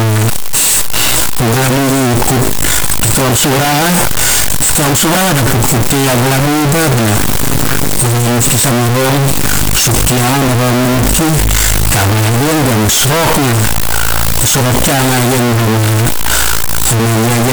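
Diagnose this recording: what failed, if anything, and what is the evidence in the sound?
What went wrong here is at the sample-format conversion stage, and it runs the whole way through the speech. Every part comes out as loud, harsh distortion, and soft sounds are as loud as the strong ones. That points to signed and unsigned mixed up on the 8-bit samples, likely a reader flipping the top bit. Each zero crossing then throws the waveform across the full range.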